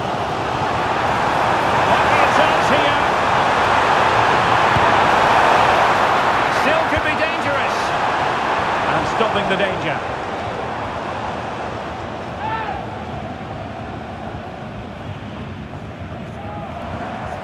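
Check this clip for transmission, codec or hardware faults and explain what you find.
No transmission, codec or hardware faults.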